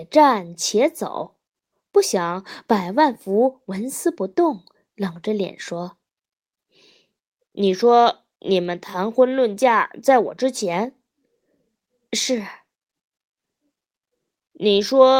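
Nothing goes wrong anywhere in this bit of speech, so there's no technical fault to point to at any moment.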